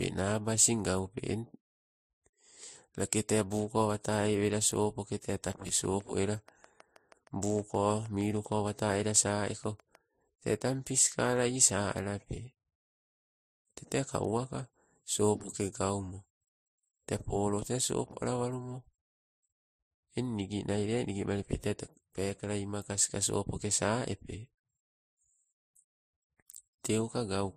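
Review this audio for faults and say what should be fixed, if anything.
Transcoding between lossy codecs, throughout the clip: nothing is present above 15.3 kHz, and two different kinds of coding smear are heard together. This points to an MP3 pass near 44 kbit/s followed by Vorbis near 35 kbit/s, the second stage re-encoding the first stage's artefacts and adding its own. Encode once, from the original source, with a single codec.

Train of clicks, 5.53 to 9.96 s: around thirty evenly spaced clicks at 6.33 per second, roughly as loud as the speech, ticking through the pauses as well. Their near-identical shape and steady pace point to a likely source in interference from nearby equipment or a faulty connection or power supply. Keep the recording chain shielded and away from such equipment, and use sound connections and a stable power supply.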